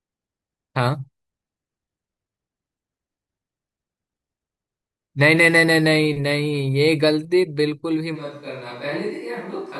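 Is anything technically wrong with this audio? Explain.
Yes. From 8.17 s to the end, a switch to a distant microphone, likely after the close mic dropped out, turns the speech hollow and roomy, about 5 dB quieter, with thinner bass. The waveform steps down at once, and the spectrogram shows a weaker low end and a raised noise floor around 35 dB below the speech.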